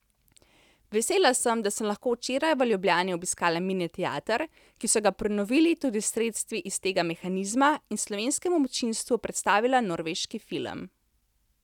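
There are no technical faults to describe in time order anywhere in the recording.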